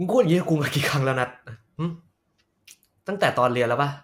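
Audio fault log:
No faults found in this recording.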